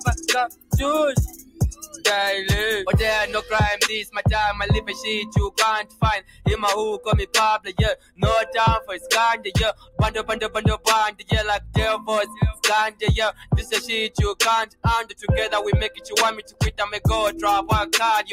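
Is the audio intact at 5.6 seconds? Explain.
No. From 4.88 to 6.46 s the sound is cut by the noise suppressor, which mistakes steady or decaying material for noise and pulls it down by up to about 16 dB, roughly 0.7 s in all. Throughout the clip, a noise suppressor applied to music or sounds pumps the level by around 10 dB, thinning held tones and tails while attacks pass through.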